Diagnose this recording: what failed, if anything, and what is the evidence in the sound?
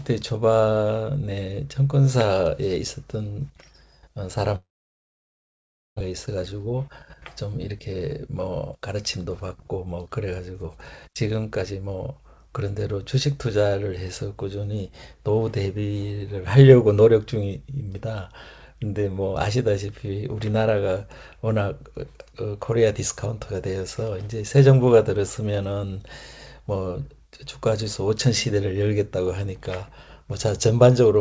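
Network stage: from 4.56 to 6.02 s the speech gives way to a brief fading buzz, then about 1.3 s of near-silence, and resumes with roughly a second of material gone. This is a long network dropout, likely a packet-loss burst, concealed by extrapolation.

Jitter buffer stage: the speech runs hurried at unchanged pitch from 6.10 to 9.33 s (106%), 9.77 to 10.64 s (109%) and 11.08 to 12.62 s (107%). This jitter buffer speed-up trims pitch-period-sized slices to drain the backlog left by the dropout, about half a second in total, through a G.722 path that has nothing above 8 kHz.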